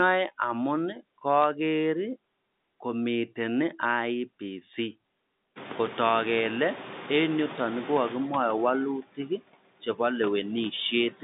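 A telephone speech recording carried over a G.711 A-law line, band-limited to roughly 150 Hz to 3.7 kHz, shows four kinds of fault. Noise suppressor artifacts run throughout: steady background is pulled down by about 20 dB between phrases and swells back under them. Speech cut by the noise suppressor hits at 0.94 to 1.25 s (drops of about 20 dB) and 9.02 to 9.4 s (about 17 dB). Roughly a tenth of a second of soft speech sinks with the noise, which sets it apart from a network dropout because the sound fades rather than stopping abruptly. Bit errors on a digital phone line give sharp isolated ticks at 1.42 s and 10.64 s. Each error corrupts a single sample, from a tiny fraction of flipped bits, heard as a click over intact speech rather than a gap or smear. Noise suppressor catching up follows the room noise jumping by about 22 dB near 5.5 s. From 5.55 to 8.21 s the louder background leaks through with only about 7 dB of reduction and then gradually sinks over about 2.7 s, a slow settling that distinguishes it from the constant pumping of the suppressor elsewhere.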